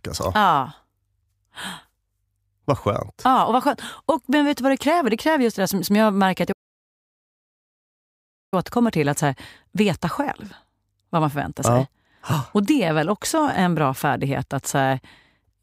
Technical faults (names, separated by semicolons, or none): playback stall